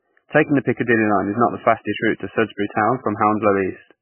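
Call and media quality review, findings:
Heavy watery, swirly smearing throughout, treble gone above about 3 kHz; likely MP3 compression at a very low bitrate, weak spectral lines toggling frame to frame.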